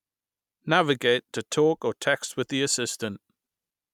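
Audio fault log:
No fault found in this speech clip.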